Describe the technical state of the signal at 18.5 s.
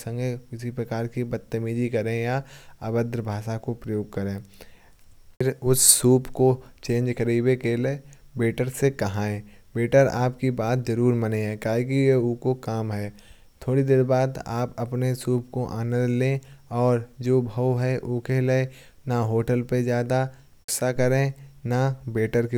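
At 18.5 s the speech signal is intact, with no fault present at that moment.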